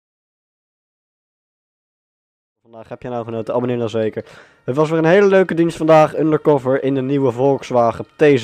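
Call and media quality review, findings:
No faults found: the deliberate fade-in rises smoothly from around 2.5 s to full level at 3.53 s.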